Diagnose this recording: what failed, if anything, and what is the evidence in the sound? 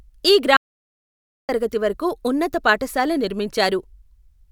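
Audio dropout to silence from 0.57 to 1.49 s: the speech cuts off mid-flow and about 0.92 s of silence follows, with no room tone, before it resumes at "తరగతి వరకు ఉన్నత పాఠశాల". The likely cause is a lost input link, while the recorder kept writing silence.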